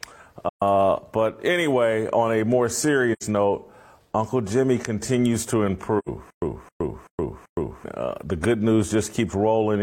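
At 0.49 s, 3.12 s and 5.98 s the speech drops into short, soft-edged holes, lasting to 0.62 s, 3.23 s and 6.08 s. This is AAC frame loss with muting. The missing frames were decoded as silence, and the overlapping transform windows fade the sound out and back in. The first hole is about 128 ms, which fits three frames. The other two are about 85 ms each, which fits two.

From 6.30 s to 7.84 s the same 265 ms burst of speech plays four times at a steady 384 ms pace, each time followed by about 119 ms of dead digital silence. This is stutter with silent gaps. The player or stream likely stalled, replayed its last fragment on each retry, and then ran empty. The speech that belonged in that stretch never arrives.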